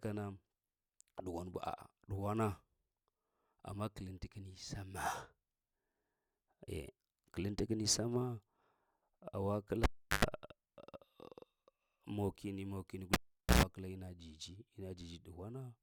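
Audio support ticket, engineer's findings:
Cable pulled and plugged in, twice: 9.84–10.25 s, then 13.14–13.63 s right after "mokini mokini". Pop, about 0.36 s and 0.45 s of near silence, about 0.11 s of mains buzz (50 Hz, then 60 Hz) as the tip touches, then a second pop on reseat. Check the lead and jack.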